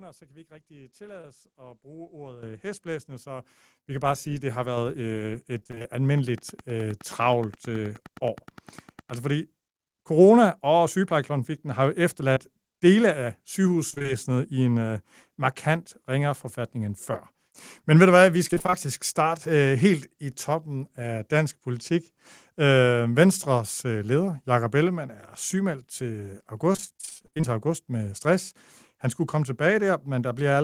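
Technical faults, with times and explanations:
1.21–1.25 s and 12.34–12.38 s, short concealed packet loss: Each time about 20 ms of audio failed to arrive at the decoder in time. The receiver patched the hole by carrying the previous sound forward, about 20 ms of invented signal, then merged back into the real stream. The speech gives a quick smear or wobble there, and a brief consonant can drop out.
2.43 s, 3.45 s and 4.77 s, microphone volume stepped up: The call software judged the microphone too quiet and raised its input gain in single steps, by about 10 dB, then about 8 dB, then about 4 dB. The second step falls between "hestblæsende øh så" and "vi kan bare sige". The third comes right after "sige at det har". Voice and background jump louder together each time.
5.59–5.86 s, 13.90–14.10 s, 18.48–18.87 s and 26.73–27.45 s, repeated packet loss (robotic sound): Here packets went missing again and again. 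About half of each stretch is concealment. The holes are mostly around 20 ms, with the longest about 32 ms in the final stretch. About 140 ms, 100 ms, 140 ms and 360 ms are lost in turn. Each patch barely finishes before the next gap starts. The result is choppy speech with pieces missing. The last stretch ends just before "august med stress".
6.18–9.11 s, train of clicks: A steady run of similar pulses rides over the audio at about 9.6 per second, evenly spaced, roughly 30 in total. At their peaks they are about as loud as the speech, so they tick through the pauses as well. The likely cause is electrical interference or a faulty connection or power supply, which injects a pulse at a fixed rate.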